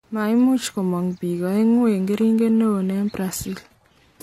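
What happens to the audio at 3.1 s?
At 3.1 s the speech is inside a stretch played from an adaptive stream at a lower bitrate, running from 1.52 s to the end. The quality drops abruptly with no gap, with nothing above 14.9 kHz, a switch that suggests a change from roughly 96 kbit/s AAC to a 24 kbit/s HE-AAC version.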